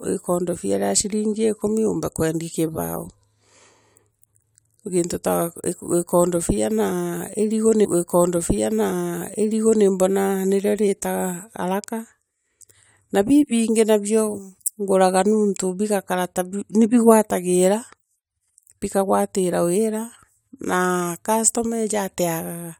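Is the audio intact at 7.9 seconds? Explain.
No. At 7.9 seconds the playback is inside a stream segment repeated fault running from 7.84 to 9.84 s. The player queued the same segment twice, so about 2.0 s of speech plays again, preceded by a brief blip at the jump back.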